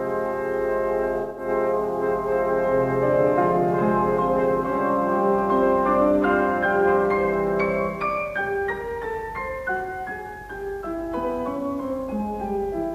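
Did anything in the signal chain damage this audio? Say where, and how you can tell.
Yes. AAC frame loss with concealment runs from 1.21 to 1.48 s, a gap of about 171 ms at the codec stage of delivery, which fits four lost AAC frames. In that stretch the sound turns into a smeared, noisy, phasey patch. The decoder had nothing to decode, so it rebuilt the audio from the last good spectrum with scrambled signs and carried-over energy. That produces texture without real detail until proper frames resume.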